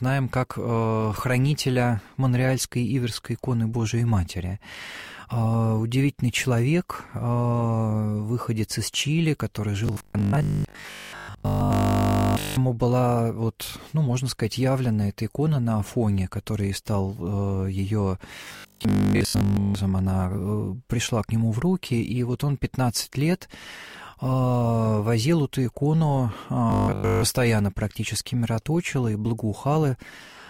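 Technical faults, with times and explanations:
9.87–12.57 s, 18.45–19.75 s, 26.70–27.24 s: robotic sound from repeated short buffers. A rigid, metallic 50 Hz buzz replaces most of the sound. Likely cause: one 20 ms stretch replayed repeatedly while late audio was skipped.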